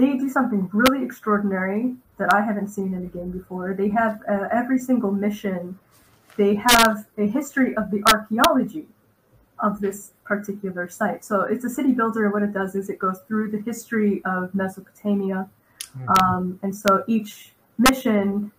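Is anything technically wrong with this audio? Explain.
Yes. Integer overflow breaks through at 0.86 s, 2.31 s, 6.69–6.85 s, 8.07–8.45 s, 16.16–16.20 s, 16.88 s and 17.86–17.89 s, wherever peaks push past the integer ceiling, by anything from barely to about 5 dB. Rather than being held at the limit, those samples wrap to the opposite extreme and sound as harsh, violent cracks. On a waveform, peaks leap from top rail to bottom rail; a spectrogram shows bright full-height vertical streaks.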